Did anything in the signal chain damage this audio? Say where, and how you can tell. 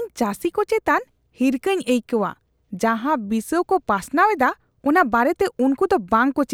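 No, nothing in the signal chain damaged this audio.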